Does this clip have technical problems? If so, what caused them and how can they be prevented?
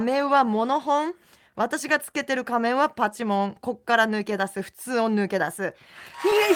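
Yes. The speech carries clock drift between sender and receiver throughout. The sender's clock runs about 2 percent slower than the receiver's. The jitter buffer keeps draining, so the receiver must pad the stream to keep up. Adaptive resampling at the receiver, locked to the measured drift, would prevent this.

Repeated timing corrections run from 0.25 to 5.63 s. The receiver repeats small pieces to stretch playback to about 99 percent speed, adding roughly 70 ms overall. Smoother time-stretching or resampling would hide them.

A short stall from a late packet occurs from 2.11 to 2.17 s. A packet arrived late and the buffer ran dry. The receiver held the last sound for 24 ms, heard as a slight buzz or dip. Nothing was lost, but the delay grew by 24 ms. A slightly deeper jitter buffer would absorb such late arrivals.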